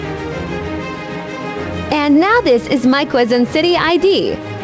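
No faults are audible; the sound has passed through a call path whose band stops at 8 kHz, which fits a wideband codec such as G.722 at 64 kbps.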